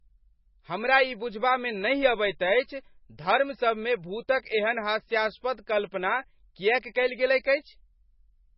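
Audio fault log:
throughout, MP3 compression: The encoder was likely starved of bits, with damage heavy enough to point to a bitrate near 18 kbps. It discarded all content above 5.5 kHz and zeroed weak frequency lines that flicker on and off between frames. The speech therefore sounds dull and muffled, with a watery, swirling texture. S sounds lose their crispness and turn metallic, and consonant onsets smear instead of landing cleanly.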